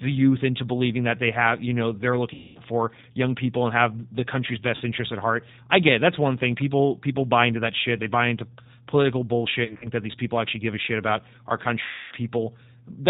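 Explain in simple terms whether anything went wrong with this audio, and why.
A couple of things went wrong. The whole recording has passed through the G.729 codec, a squeezed-down phone-call format that rebuilds speech from a rough model of the voice instead of storing the actual sound. It cuts off everything above about 4 kHz, so the speech sounds muffled and a bit rough and robotic throughout. You can still follow it, but the damage is plainly audible.

On top of that, there's VoIP packet loss concealed by the speech codec at four spots. Chunks of the call went missing, and the decoder filled the gaps by stretching out the last bit of voice it had, fading it as it went. You hear a stretched-out buzzy tone or coloured noise in place of real speech from 2.34 to 2.60 s, briefly from 4.76 to 4.82 s, in scattered bursts between 9.65 and 9.89 s, and longest from 11.83 to 12.14 s.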